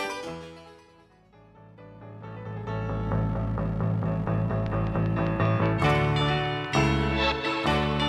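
From 4.66 s to 8.04 s a train of clicks runs over the sound: about twenty near-identical pulses at a steady 5.05 per second, each peaking a few decibels above the audio and audible in quiet gaps too. The likely cause is interference from nearby equipment or a faulty connection or power supply. Unlike random crackle, these clicks share one shape and keep a metronomic spacing, so they read as ticking rather than scattered dust-like noise.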